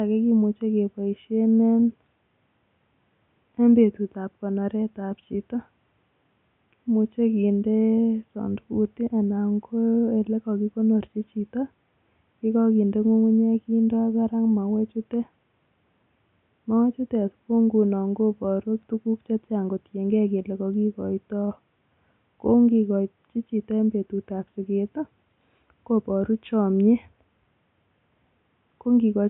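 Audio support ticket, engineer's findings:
No system fault found in the speech path; the only background is ambient room noise about 48 dB below the speech, captured at the microphone.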